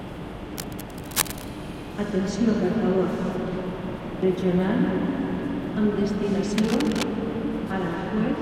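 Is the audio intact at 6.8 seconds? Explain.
No. A likely worn, moving cable contact makes its resistance flicker, causing cable scratch noise from 6.58 to 7.03 s: dense scratching bursts some 10 dB under the sound.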